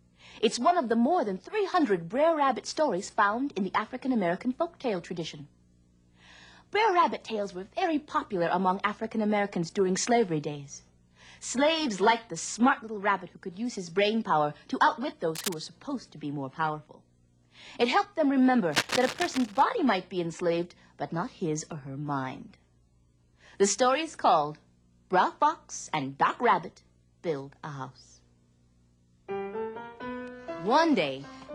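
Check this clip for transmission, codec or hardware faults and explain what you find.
Two bursts of cable scratch noise appear, at 15.35 to 15.54 s and again at 18.71 to 19.63 s. The likely cause is a worn lead, plug or control being shifted, so its contact resistance jumps about rapidly and injects ragged noise. The first burst is brief and sits somewhat below the sound; the second lasts nearly a second and is louder, close to the level of the audio itself, heard as a rough scratching rustle over it.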